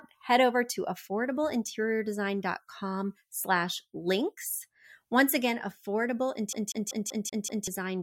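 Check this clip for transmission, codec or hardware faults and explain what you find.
One fault is present: a CD stuck on one turn, from 6.53 s to 7.68 s near the end of the speech. A scratch throws the laser back one track at the same point on each rotation, so a 0.19 s segment of audio replays six times, with a short mute at every jump back. The result is the rapid, evenly spaced stutter of a skipping CD, repeating at intervals of about 191 ms.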